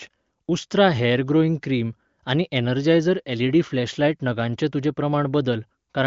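No technical faults can be heard in this speech, which is carried by the AMR wideband (HD Voice) codec at 23.05 kbit/s with nothing above 7.6 kHz.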